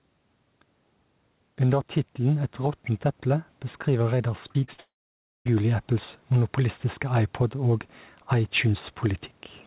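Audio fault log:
Throughout: gain pumping. The background rises in the pauses and dips each time the speech gets loud, a swing of only a few decibels. This is likely caused by the input gain being set too high for the microphone, with a fast limiter or compressor pulling the level down on every loud syllable. Loud and quiet passages therefore sit closer together than they should, and the speech sounds squashed. The narrow band above 4 kHz is empty throughout, which is normal for the G.711 call path.
4.48–4.80 s: repeated packet loss (robotic sound). Over this third of a second the speech breaks up into a rapid series of five short holes, the longest about 42 ms. Each hole is patched by extending the last fragment of sound, so roughly a third of the span is synthetic continuation rather than real speech. Because the patches come in quick succession, the result sounds choppy, with pieces of the speech missing.
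4.80–5.47 s: long network dropout. Right after the choppy stretch, no new audio arrives for about 0.66 s, likely a network outage. The receiver first carries the last sound forward as a fading buzz. That tail decays within about a tenth of a second, leaving about 0.57 s of silence. Speech resumes at 5.47 s, and the material from the lost interval is gone for good.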